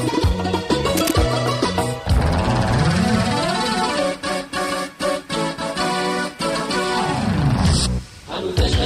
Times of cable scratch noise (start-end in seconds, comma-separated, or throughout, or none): 0.97-1.13